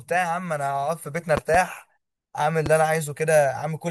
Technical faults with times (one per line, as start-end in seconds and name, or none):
1.37-1.57 loud pop
2.66-2.69 loud pop